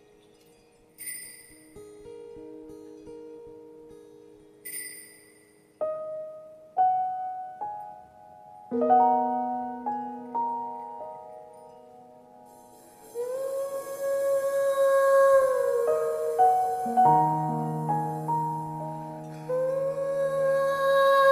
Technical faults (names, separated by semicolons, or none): none